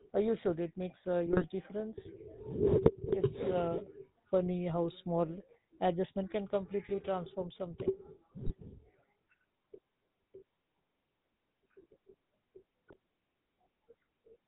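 A buzzy, gravelly roughness runs through the whole speech clip, with nothing audible above 4 kHz, which fits the GSM full-rate codec at 13 kbps. It rebuilds the voice from a vocal-tract model driven by sparse, regularly spaced pulses, and that coarse excitation is plainly audible.

Squawks, pops and gargling break through at 1.26 to 1.45 s, 2.86 to 2.95 s, 8.41 to 8.53 s and 12.88 to 12.96 s. These are GSM bit errors: corrupted filter, pitch or gain values reached the decoder, bending the spectrum or spiking the level for brief stretches.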